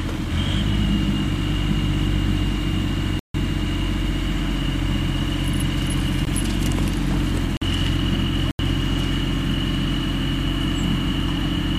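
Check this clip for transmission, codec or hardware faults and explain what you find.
Four blocks of digital silence break up the sound, all the same fault.

Block of digital silence at 3.19 to 3.34 s: most likely the output buffer wasn't filled in time, so about 150 ms of samples became zeros. It's heard as a clear hole.

Block of digital silence at 6.25 s: a gap of about 18 ms, just long enough to come across as a very brief hole.

Block of digital silence at 7.57 to 7.62 s: about 46 ms of zeros, which fits one missed 2048-sample buffer. It's heard as a short dropout.

Block of digital silence at 8.51 to 8.59 s: about 82 ms of silence, a short but distinct hole.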